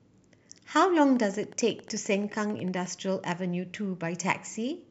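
From 1.07 to 2.87 s a train of clicks ticks over the speech at a steady 11.2 per second, about twenty alike pulses roughly as loud as the voice, likely from nearby equipment interfering. The even spacing and matching shape separate it from random crackle.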